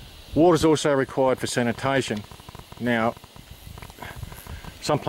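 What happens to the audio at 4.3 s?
At 4.3 s the audio sits inside a train of clicks running from 1.09 to 5.03 s: about 12 sharp pulses per second, unevenly spaced and peaking near the sound's own level, likely from electrical interference or a faulty connection. It sounds like irregular ticking. A spectrogram shows thin vertical broadband lines, and the waveform shows narrow spikes.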